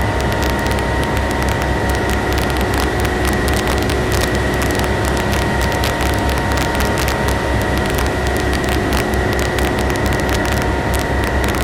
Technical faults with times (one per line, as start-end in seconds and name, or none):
0.00-11.63 integer overflow